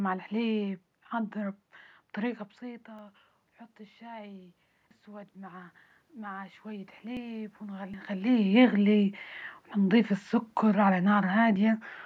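At 2.99 s, between "الحليب نحضره بطريقة" and "ونحط الشاي", there is a small forward jump in the speech, with no gap of silence. This is a dropped buffer (overrun), likely from the capture software failing to read its samples before the hardware overwrote them. About 40 ms of audio is lost, and the two sides are spliced together. A longer skip follows at 4.91 s, just after "ونحط الشاي", where roughly 150 ms disappears. Further skips of the same kind, each losing about 40 ms, occur at 7.17 s, 7.94 s and 11.56 s.

From 5.04 s to 8.15 s, the automatic gain rises. The input level drops by about 17 dB, and the gain control responds by slowly raising its gain by about 7 dB over roughly three seconds. Because the gain acts on the whole signal, the room noise swells along with the speech during this stretch. The level changes around 2 s and 8 s come from the talker moving relative to the microphone.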